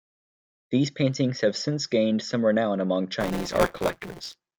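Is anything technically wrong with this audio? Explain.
Yes. From 3.20 s to the end of the clip, the speech has buffer tearing. The program filling the playback ring buffer and the hardware draining it have drifted out of step, so their positions cross inside each period. A slice of every buffer, around 15 percent, is stale audio from roughly 20 ms earlier, spliced in with abrupt edges on both sides. This produces a steady robotic buzz at 172 Hz, which fits a 256-sample buffer. The buzz rides on the speech and drops out in the gaps between phrases.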